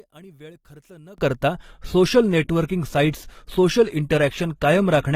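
One channel inverted, from 0.00 to 1.18 s: the speech is nearly gone, about 25 dB quieter than what follows, leaving only a faint trace. The likely cause is one stereo channel with reversed polarity, so that the centred speech, being nearly identical in both channels, cancels when the two are summed to mono. Only the small difference between the channels survives, which is why the remnant sounds weak.

Adaptive stream at a lower bitrate, from 1.54 s to the end: the quality steps down abruptly, with no gap in the sound. The treble thins out, with nothing above 14.9 kHz, and the speech takes on more codec artefacts. This fits the player switching from an AAC-LC stream at about 96 kbit/s to an HE-AAC version at about 20 kbit/s when the connection slowed.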